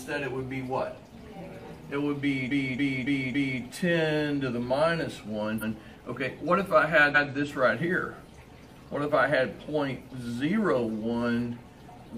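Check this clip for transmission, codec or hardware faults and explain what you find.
Repeated frames occur three times. At 2.47 s the decoder played a 278.6 ms block of compressed frames four extra times, through 3.58 s. At 5.58 s and 7.11 s a 139.3 ms block plays twice. Each repeat stutters.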